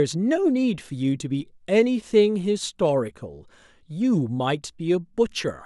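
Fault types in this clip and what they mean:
No fault types are present in this clip.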